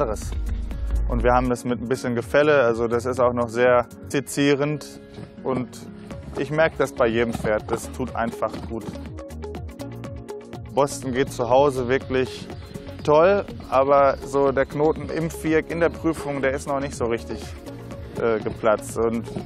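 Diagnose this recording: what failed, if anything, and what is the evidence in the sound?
At about 4.10 s the audio jumps forward abruptly, with a tiny blip right at the join, and the material on either side doesn't line up, as if a chunk of the programme has simply gone missing. That points to the network and playback stage, most likely a stream segment skipped: one segment of the segmented stream never arrived in time, and the player dropped it and carried straight on with the next one rather than stalling.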